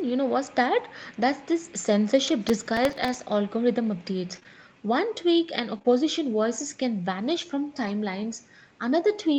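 From 2.27 to 2.33 s, and again from 7.84 to 7.90 s, there is a lost packet rebuilt from error correction. Two packets went missing, but the following packets carried low-bitrate copies, so the decoder filled about 40 ms with those copies. The result is a brief rough, noisier patch rather than a gap or a repeated sound.

Between 2.49 and 3.14 s comes processor overload crackle. The processor kept missing its deadlines for tiny buffers, which fits buffers of around 1.5 ms, and around fifteen times it replayed a piece of old audio with hard edges. Together these form a gritty, tearing crackle over the sound. This is a cluster of many tiny edges that ends when the load eases, unlike isolated network dropouts.

From 4.35 to 5.86 s there are scattered short gaps. Roughly four small network losses, each no longer than about 20 ms, were patched by extending the preceding sound. They are heard as separate brief ticks and smears spread across the span, not one continuous stretch of grit.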